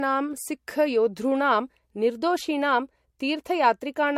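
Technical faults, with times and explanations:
Throughout: generation loss. The speech sounds swirly, hollow and smeared, with softened attacks and nothing above 16.5 kHz. It fits repeated lossy coding at about 64 kbit/s MP3, likely around three passes, each re-quantising on a shifted frame grid so noise and spectral holes accumulate.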